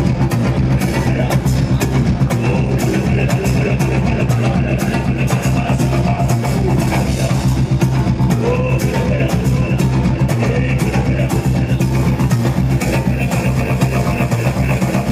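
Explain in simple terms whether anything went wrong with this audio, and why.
Something does go wrong near the end. From 11.74 s until the clip finishes at about 15 s, a gritty, fizzy buzz rides along with the louder and brighter parts of the sound. This is crude rate conversion. The audio's speed of sampling was changed by simply repeating or skipping individual samples instead of smoothing properly, which fits a jump from 32 kHz to 44.1 kHz. Unlike ordinary distortion from overload, the stray tones have no musical relation to the sound itself, and the fizz stays fairly faint.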